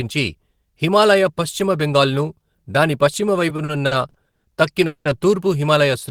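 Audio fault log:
3.49–4.47 s, repeated stalls (stutter): the sound catches six times here, with about 290 ms of stretched-out filler in total and the longest hold near 120 ms. That's roughly 30% of the stretch. The jitter buffer kept running dry and the receiver kept extending the last sound. Nothing's lost, it just drags.
4.86–5.08 s, call audio freeze: one longer hang, with about 190 ms of the last sound carried on as a fading buzz or hiss and ending in roughly 30 ms of silence before things pick up again where they stopped. That points to packets likely held up in transit, with delay jumping about 190 ms and emptying the buffer. So a gap is inserted, but nothing's missing.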